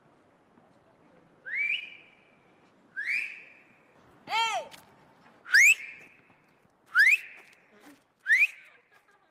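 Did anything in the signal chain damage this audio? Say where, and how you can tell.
Yes. Short concealed packet loss at the network stage, 1.79 to 1.83 s. About 20 ms never arrived, and the receiver's extrapolated fill leaves a brief smear.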